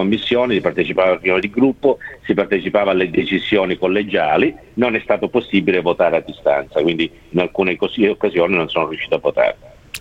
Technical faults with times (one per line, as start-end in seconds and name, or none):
none